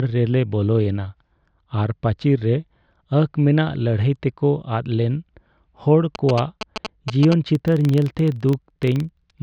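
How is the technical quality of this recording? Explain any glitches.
The recording has two distinct technical faults, both in the second half of the speech.

GSM signalling bursts, 6.15 to 7.34 s: a nearby 2G phone is exchanging short control bursts with the network rather than carrying a call. The audio circuitry demodulates that radio energy into the signal path. The result is a galloping dit-dit-dit of ticks and brief buzzes at about 217 Hz, sitting only a few decibels below the speech.

Filter restarted on every block, 7.55 to 9.42 s: a filter in the processing chain discards its internal state at each block boundary and restarts from zero, so every block opens with a small transient. Those transients repeat about 23.4 times per second, which fits a 2048-sample block. They are heard as a low, regular ticking buzz that runs to the end of the clip and grows louder or softer with the speech level.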